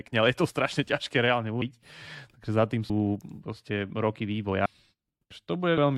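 Compressed frames skipped at 1.62 s after "to strašne ťažké reálne", 2.90 s between "za tým" and "proste roky", 4.66 s after "proste roky", and 5.78 s: frames that fit a 32 ms size never play, so the speech jumps ahead by about 200, 150, 500 and 300 ms.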